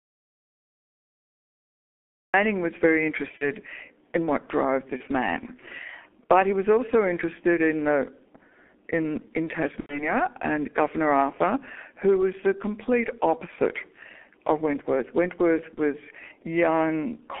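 From the first instant the speech is missing: an audio dropout to silence is already under way and runs to 2.34 s. The gap is silent with no room tone, and the sound starts abruptly on "was very". This is most likely an input lost or muted while the recorder kept writing samples. Anything said during that stretch is unrecoverable.

Across the full clip the speech carries heavy G.723.1 codec damage, consistent with its 6.3 kbit/s mode. The band is confined to roughly 250 Hz to 3.4 kHz, so the sound is thin and muffled with no low body and no top end. The slowly updated vocal model over 30 ms frames gives a hoarse, grainy texture and smears consonants into one another.

VoIP packet loss concealed by the speech codec occurs four times. At 3.38 to 3.49 s, right after "was very", the decoder bridges a gap that fits one lost 30 ms frame. It repeats its last pitch and spectral shape, stretching the sound briefly, and the voice stays weakened for a while after real data returns. 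A similar single-frame event falls at 4.97 to 5.03 s. The longest, at 9.80 to 10.12 s after "in in", fits three lost frames, about 90 ms. There the extrapolated sound fades and is muted at the third lost frame before the signal recovers. The last, at 15.74 to 15.80 s, is again a brief single-frame patch.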